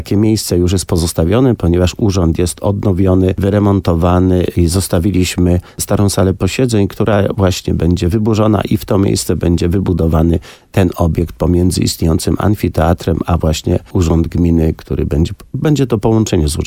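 Nothing stood out on listening to this audio.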